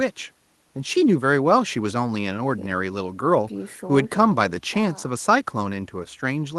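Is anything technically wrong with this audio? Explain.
No, nothing technically wrong can be heard here.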